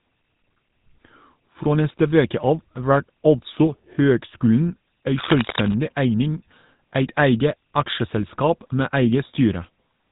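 GSM full-rate codec damage runs throughout the speech: a vocal-tract model driven by sparse regular pulses gives buzzy, gravelly roughness, nothing above 3.9 kHz, consistent with 13 kbps.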